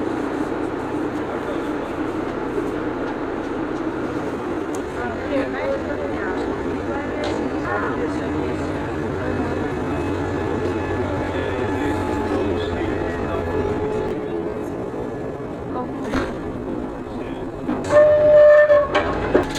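From 4.32 s to 19.06 s the pace abruptly drops to about 0.65 times normal while pitch stays put, so the sound drags. This is a time-stretched section, likely from software lengthening the audio by repeating short pieces to hold pitch steady.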